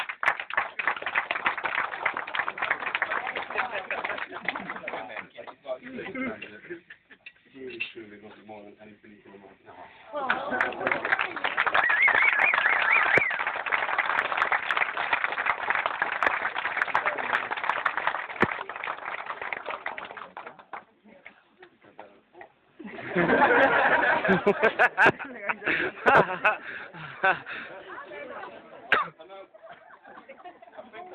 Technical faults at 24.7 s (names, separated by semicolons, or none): none